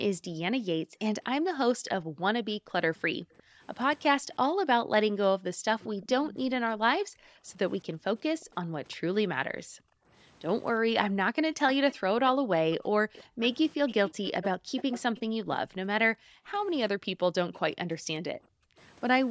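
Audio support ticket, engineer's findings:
Room background pumping down, dips as deep as about 40 dB between 0.19 and 10.1 s (around 3 s of dips in total) and about 33 dB between 12.35 and 18.78 s (around 2 s). Background gated by the echo canceller: AEC suppression clamping the mic hard during far-end playback, releasing afterwards.

Faint delayed second copy of the speech at 3.37–4.04 s (about −30 dB), 5.80–6.08 s (about −25 dB) and 8.40–8.45 s (about −35 dB), lagging 358 ms. Then 11.91–15.20 s (about −15 dB) and 17.54–17.58 s (about −35 dB), lagging 398 ms. Echo leak, likely a loudspeaker-side canceller passing residual pickup back.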